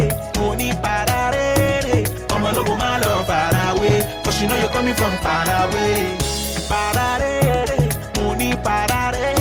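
No technical faults are audible.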